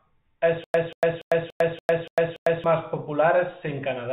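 A short speech clip sounds telephone-narrow throughout, with nothing above 4 kHz, which fits G.711 telephone coding at 64 kbps. From 0.64 to 2.64 s it has a stutter with silent gaps: the same 186 ms burst plays seven times at an even pace, each followed by about 102 ms of dead digital silence, repeating every 287 ms. The likely cause is a player or stream stall, with each retry replaying the last buffered fragment before running empty. The audio from that stretch is lost.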